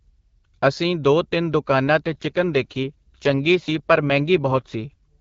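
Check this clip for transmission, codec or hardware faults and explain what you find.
There's one fault here, an AMR rate drop, heard on the speech over an HD Voice (AMR-WB) call with light codec coloring.

From 2.06 s to 4.93 s, just after "ਅਸੀਂ ਦੋ ਤਿੰਨ ਦੁਕਾਨਾਂ", the voice turns rougher and more synthetic. It sounds like a weak link forced the codec down, which fits a switch from 12.65 to 8.85 kbit/s, with the spare bits going to error protection. There's no gap and no loss of bandwidth.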